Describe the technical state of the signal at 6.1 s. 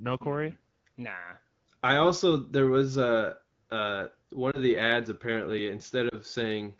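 At 6.1 s there is a lost AMR speech frame, affecting roughly 6.09 to 6.15 s. The disturbance points to a single 20 ms frame that failed its checksum after radio errors. The AMR-WB decoder covered the gap by repeating the previous frame's pitch and vocal tract parameters at reduced gain. The result is a brief dip or warble in the speech rather than a full dropout, after which the wideband sound, consistent with 12.65 kbit/s coding, resumes.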